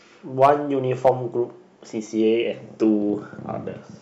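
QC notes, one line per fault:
0.42–0.50 s and 1.05–1.09 s, hard clipping: peaks overdrive the stage by about 4 dB and about 3 dB, so the waveform tops are sliced flat. This produces brief crackle on loud speech peaks. A spectrogram shows harmonic smearing reaching into the upper kHz range.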